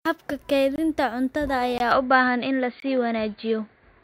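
Speech clip with a gap between chunks at 0.76, 1.78 and 2.80 s: hard-edged 21 ms silences recurring every second, seen as flat-line holes in the waveform and blank vertical stripes on a spectrogram. From 1.91 s the sound turns duller with no pause and little level change, the likely result of the input switched to a poorer device. Nothing above 4.7 kHz survives, and a faint new noise floor appears, so the spectrogram shows a sharp ceiling.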